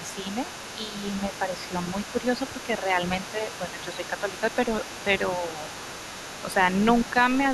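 From 0.0 s and throughout, the other side's voice leaks through at about 15 dB below the speech. The likely cause is an echo canceller leaving loudspeaker sound in the microphone.

Speech is suppressed in double talk at 0.0–0.3 s, 0.77–0.93 s, 1.22–1.63 s, 3.33–4.43 s and 6.48–6.57 s. The voice dips by roughly 5 to 10 dB. This is likely the canceller turning down both voices when they overlap.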